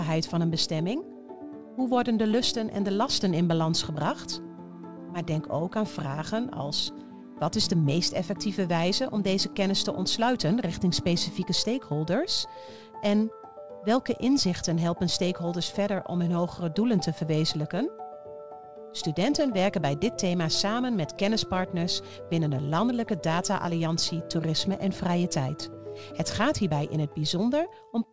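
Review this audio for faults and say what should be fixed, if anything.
Clock drift between sender and receiver runs through the whole recording. The sender's clock is about 4% fast, so the receiver's jitter buffer keeps overfilling and has to shed audio to stay in step. Unlike packet loss, which leaves isolated gaps or smeared concealment at random points, drift produces a steady one-directional pressure that never lets up, and the sound stays intact between the small edits. Prevent it by enabling the receiver's adaptive clock-rate compensation, resampling the incoming stream to match the local clock.

Repeated timing corrections can be heard from 0.08 s to 28.05 s. The receiver trims short pieces at uneven intervals, all in the same direction, which pushes the tempo to about 104% of normal. These cuts are tiny and unevenly spaced, and the pitch stays where it is, which separates them from a sample-rate mismatch, where everything plays back faster or slower, pitch included, with no hiccups at all. 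The G.722 path itself, with its cut-off at 8 kHz, fits a 64 kbps stream and is not the source. Prevent this by correcting the drift with smooth resampling, so the buffer never needs abrupt trimming.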